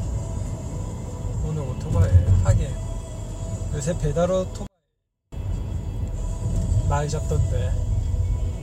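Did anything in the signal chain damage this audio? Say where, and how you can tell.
Yes, a 24-bit alignment error in format conversion: from 4.67 to 5.32 s the sound drops about 48 dB yet stays clean, so low-byte 24-bit samples were read as 32-bit.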